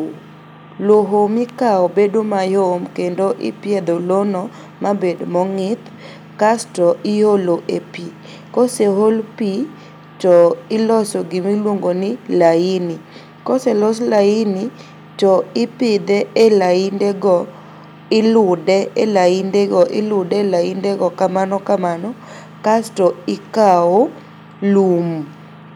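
No technical faults can be heard anywhere in the speech recording.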